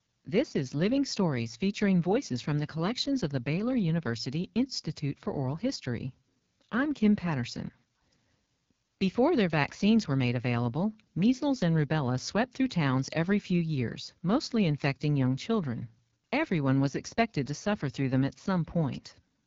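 Throughout, the speech has passed through the AMR wideband (HD Voice) codec at one of its lowest modes, which fits 8.85 kbit/s. Too few bits for the vocal tract model leave the speech plainly rough and raspy, with nothing above 7.5 kHz.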